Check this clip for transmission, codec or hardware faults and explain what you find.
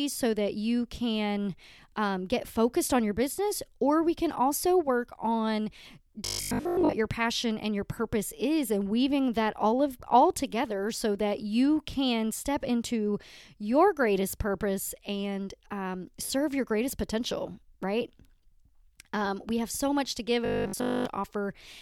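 Two faults, both robotic sound from repeated short buffers. At 6.25–6.95 s, after "can also work on" and before "your passion and your", most of the audio becomes a rigid 50 Hz buzz. At 20.45–21.05 s, after "so much to give", it is entirely buzz. The likely cause is starved playback looping roughly 20 ms buffers while real audio is skipped. Unlike a stutter or dropout, the buzz holds a fixed rate yet loosely tracks the speech.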